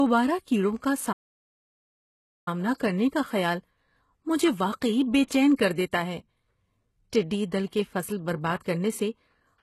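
From the start, the whole recording carries HE-AAC compression damage, and it is plainly audible. The treble that remains is not the original. It is likely rebuilt by copying lower bands upward under a coarse envelope. Its harmonics do not line up with those below. S sounds come out gritty, metallic and lispy. The damage fits a very low bitrate of about 16 kbps.

At 1.12 s there is a playback stall. The sound stops in mid-flow and the output goes silent. The gap lasts about 1.34 s, until 2.48 s. Then the speech resumes. The player has likely run dry of data, or its thread has been blocked. Either way, nothing reaches the output until it recovers.

From 5.27 to 5.31 s there is pre-echo. A short hiss runs for about 36 ms ahead of a sharp attack. The codec spreads quantisation noise across a whole block. Here the attack falls late in that block. Noise sized for the loud part fills the quiet moment before it. 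The attack itself sounds softened and smeared.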